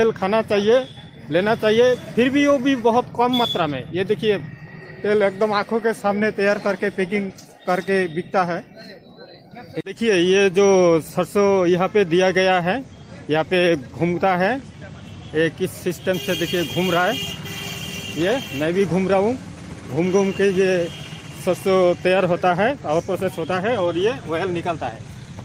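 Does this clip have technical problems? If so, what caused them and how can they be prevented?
No, there are no technical problems to point to in this clip. Nothing in it calls for a cause to be traced or a fix to be made.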